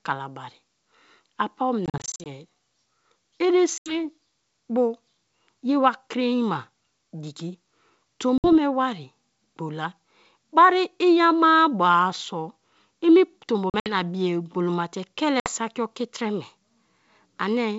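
Packet loss on an ADPCM call cuts hard silent holes at 1.86, 3.78, 8.38, 13.70 and 15.40 s. The first and fourth are scattered dropouts. The decoder's predictor and step size then drift from the sender's. Speech returns with brief distortion.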